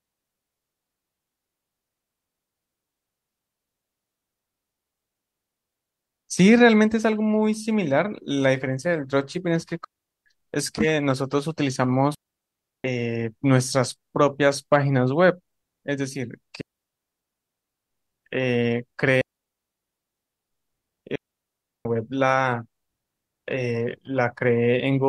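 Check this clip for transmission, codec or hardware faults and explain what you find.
The speech drops out five times from a digital wireless link. At 9.84–10.26 s, 12.15–12.84 s, 16.61–17.91 s, 19.21–20.51 s and 21.15–21.85 s it cuts to clean near-silence lasting 0.4 to 1.3 s, with no noise burst either side. This is digital wireless dropout: the receiver lost too much data and muted with a very short fade.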